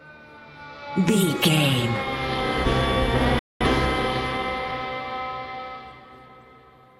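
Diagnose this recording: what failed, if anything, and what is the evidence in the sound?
The failure is a digital broadcast dropout, at the reception and decoding stage. At 3.39 s the sound fades to silence in about 3 ms and stays muted until 3.66 s. The silence lasts about 213 ms, which fits a short run of lost frames. The receiver lost the signal, or frames failed their checksum. It muted rather than play corrupt data. The audio resumes later in the programme, and what was broadcast during the gap is gone.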